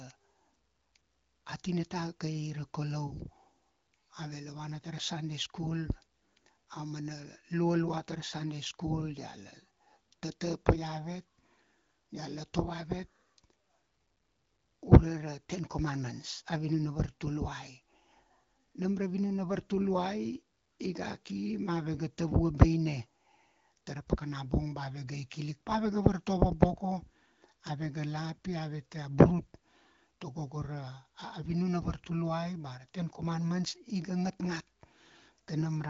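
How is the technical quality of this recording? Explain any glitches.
There aren't any glitches to point out here; what you're hearing is the speech carried over the AMR wideband (HD Voice) codec at a rate that fits around 16 kbit/s, with the usual gentle codec softening and nothing above about 7.4 kHz.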